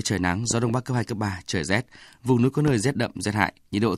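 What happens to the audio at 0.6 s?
Right after "trời nắng", a loud pop fault runs from 0.51 to 0.72 s: two sharp pops about 10 dB above the speech, likely a voltage pulse from a switch or static.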